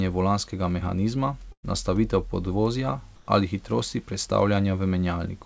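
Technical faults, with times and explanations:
1.52–1.66 s, burst of packet loss: about 120 ms of speech is missing, bridged by a fill that continues the last sound and fades out rather than a clean cut, then speech resumes further on.
3.16–3.28 s, comfort noise in place of the background: the room's textured background gives way to a steady, featureless hiss about 6 dB quieter, likely synthetic noise generated during a transmission pause.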